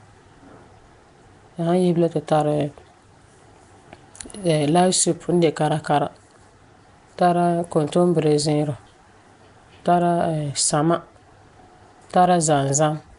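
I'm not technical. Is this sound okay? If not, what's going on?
No. The whole recording carries the marks of Nellymoser compression, likely from the old Flash microphone codec, which squeezed sound into small blocks with very few bits. The damage is plainly audible throughout: the speech has a rough, hissy haze around it and a smeared, underwater feel, because quiet parts of the sound were replaced with filler noise. Nothing is present above about 10.6 kHz, so the top sparkle is missing as well.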